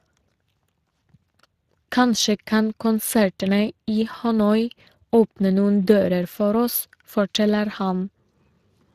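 From start to finish the speech carries Speex codec damage, and it's plainly audible. Speex is a CELP coder: it models the voice with a predictive filter and spends a limited bit budget on the excitation driving it, so the fine detail comes out rough and grainy. The texture points to a mid-range setting, somewhere around 22 kbps. There's also nothing above 15.2 kHz, so the very top of the spectrum is simply gone.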